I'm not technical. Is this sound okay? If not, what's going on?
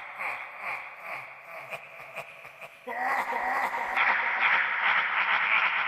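No, not quite. At 3.97 seconds the sound suddenly goes duller and stays that way to the end, as if someone had put a hand over the top end. Nothing above about 5.8 kHz survives, the overall loudness shifts a bit, and a faint new background hiss creeps in. There's no gap at the change. This is likely an input switched to a poorer device, where the recording jumped to a poorer microphone or headset partway through.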